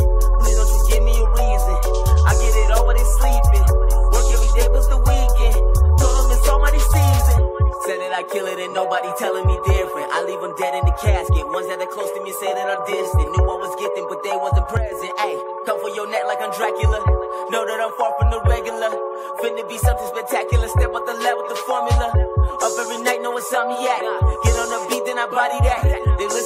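At 14.77 s to 14.92 s, one channel drops out: the level falls abruptly by about 6 dB for roughly 150 ms, likely because one stereo side went silent before the mono sum. The waveform shows a sudden rectangular notch; the spectrogram dims evenly across all frequencies.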